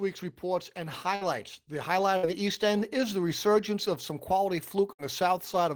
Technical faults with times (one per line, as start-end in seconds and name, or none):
1.15-1.24 burst of packet loss
2.17-2.26 burst of packet loss
4.93-5.02 burst of packet loss